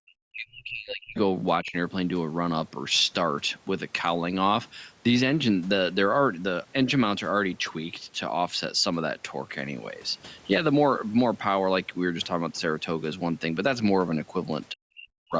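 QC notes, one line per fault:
0.00–1.16 s, 1.61–1.75 s and 14.73–15.34 s, speech suppressed in double talk: the speech dips and breaks up in pieces, falling by roughly 40 dB at its deepest across about a second at the start and half a second at the end, with a shallower dip of about 10 dB in the short middle event. The likely cause is an echo canceller that couldn't separate the near talker from loudspeaker echo while both sides spoke, so it attenuated everything.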